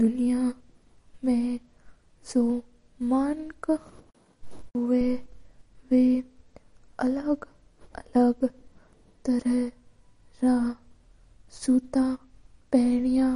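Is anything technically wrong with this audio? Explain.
Yes. MP3 compression damage runs throughout the speech: nothing is left above 10.6 kHz, and the sound is plainly watery and swirly, with chirpy sibilants and smeared consonant attacks. The likely cause is an MP3 encoder starved of bits, which fits roughly 40 kbps, cutting the treble at a fixed point and zeroing weak frequency lines that flicker between frames.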